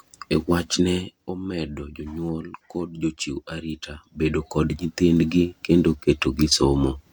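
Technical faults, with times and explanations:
0.77 to 1.24 s, zipper noise: as the speech level drops by roughly 10 dB over about half a second, the gain moves in small discrete jumps, on the order of 150 per second, rather than as a continuous ramp. Each jump puts a tiny discontinuity into the waveform, heard as a faint click, and at that rate the clicks merge into a fine ticking buzz riding on the speech while the fade is under way.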